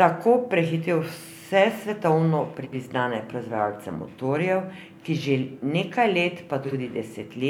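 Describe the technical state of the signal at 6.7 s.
At 6.7 s the speech has frames out of order, from 6.62 to 6.73 s. Two adjacent blocks of about 46.4 ms each play swapped. This points to single frames exchanged. The stretch sounds like a garbled flutter. No time is lost.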